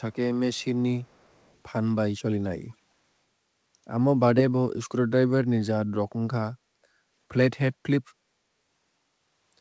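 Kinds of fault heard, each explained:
Echo leak: from 1.04 to 1.54 s a very faint copy of the speech follows about 0.43 s behind, likely far-end loudspeaker sound the echo canceller missed. A spectrogram shows weak, time-shifted ghost traces of the earlier speech, almost invisible on the waveform.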